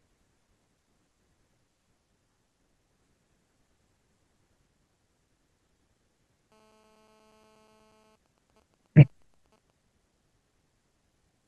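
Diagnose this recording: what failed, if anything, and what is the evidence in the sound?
GSM phone buzz, picked up in the analogue wiring: from 6.52 to 8.16 s a hard, raspy 217 Hz buzz sits about 29 dB below the speech. A nearby 2G phone in a call bursts 217 times a second and the audio circuit rectifies it. A spectrogram shows a dense comb of harmonics at multiples of 217 Hz, and the waveform shows a regular pulse train.

GSM signalling bursts, also analogue pickup: from 8.26 to 9.70 s the buzz breaks into even ticks with a longer 217 Hz buzz twice a second, roughly 30 dB down. The phone's user has gone silent, so it sends only brief groups of bursts. A spectrogram shows broken harmonic stripes, and the waveform shows clustered pulses.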